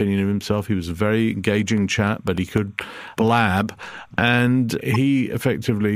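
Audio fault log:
Throughout: timecode bleed. Linear timecode at 29.97 frames per second leaks in about 45 dB down, a square wave flipping near 1 and 2 kHz, heard as faint chirping warble.
1.68–4.28 s: periodic USB or driver dropouts. Every 0.1 s about half a millisecond of signal drops to silence, around thirty evenly spaced ticks.
4.94–4.96 s: corrupt frame decoded. A single damaged compressed frame plays with misread values, placing energy at wrong frequencies for a brief moment.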